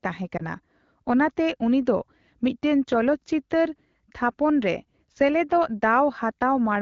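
At 0.38 to 0.42 s the speech briefly dips and warbles: a lost AMR speech frame, which fits a single 20 ms frame failing its checksum after radio errors. The decoder filled the gap by repeating the last good pitch and vocal tract settings at reduced gain. On a spectrogram the harmonics freeze into flat, slightly smeared lines and dim, and the waveform envelope sags before full level returns. The AMR-WB band edge sits near 7 kHz throughout.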